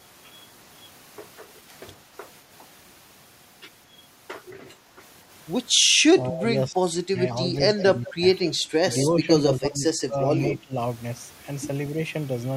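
From 6.19 to 7.21 s the speech sags by about 15 dB in patches totalling around 0.7 s. That's speech suppressed in double talk. The likely cause is the echo canceller hearing both ends at once, failing to tell the near talker from loudspeaker echo, and ducking everything. It happens again from 7.76 to 8.23 s, dipping about 20 dB for roughly 0.3 s, and from 9.2 to 10.76 s, losing about 15 dB over about 0.7 s in pieces.

Overlapping that middle stretch is echo leak: a faint copy of the speech trailing 165 ms behind, about 15 dB under the direct sound. It shows up at 7.79–8.13 s, 8.46–8.54 s, 8.92–9.05 s and 10.15–10.48 s. It's likely a loudspeaker end whose canceller didn't fully scrub its mic pickup, so scraps of the talker's own voice are sent back.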